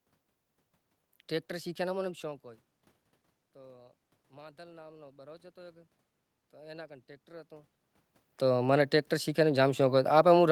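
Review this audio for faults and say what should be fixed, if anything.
Automatic gain rising, from 3.54 s to 5.94 s: the level at the microphone dropped by about 22 dB, and the automatic gain control responded by slowly raising its gain by about 5 dB over those 2.4 seconds. Because the gain applies to the whole signal, the speech and the room noise swell together rather than the speech alone returning. This differs from the level changes around 2 s and 7.5 s, which come from the talker moving relative to the microphone. To prevent it, fix the input gain at a suitable level, or give the automatic gain control a hold time and a limited maximum boost so brief input drops don't pull up the background.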